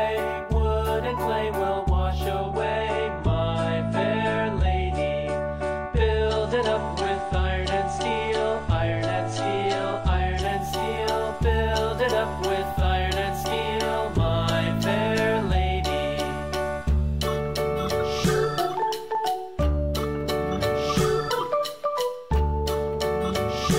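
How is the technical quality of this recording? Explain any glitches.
The quality drops once, abruptly. From 2.42 s to 10.42 s the sound turns dull and smeared, with nothing above 9.8 kHz and stronger codec artefacts, then snaps back to full brightness with no gap. This is an adaptive stream at a lower bitrate: when the connection slowed, the player switched to a leaner encoded version of the same audio. The result fits a step down from about 96 to 32 kbit/s AAC.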